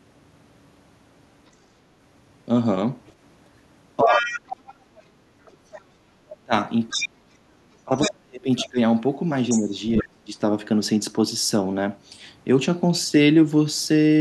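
At 3.06 to 3.13 s a faint second voice flickers in, far below the talker at about 35 dB down, the other side's voice leaking through, likely loudspeaker echo the canceller left behind. From 4.02 to 4.44 s the talker's speech dips by roughly 20 dB, speech suppressed in double talk, likely because the canceller could not separate the talker from the echo. From 4.08 to 10.06 s that other voice returns much louder, only around 10 dB under the talker, again likely uncancelled loudspeaker sound. From 6.45 to 10.32 s the talker drops away, at worst by around 40 dB, for about one and a half seconds in total, likely the same overlap forcing both voices down.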